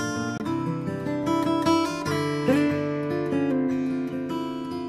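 At 0.38 to 0.40 s there is a CD skip. The laser pickup lost its track and landed on a different turn of the disc's spiral, so the player muted output for roughly 20 ms before resuming from the new position. It sounds like a brief tick and a gap, followed by the audio continuing from a point displaced from where it left off, with a discontinuity in the material at the join.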